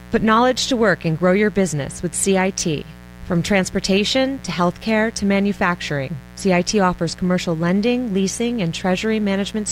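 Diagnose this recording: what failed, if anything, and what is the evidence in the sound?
Analogue wiring fault: mains buzz throughout, roughly 20 dB below the speech. Switching spikes twice per 60 Hz cycle appear on a spectrogram as stacked harmonic lines.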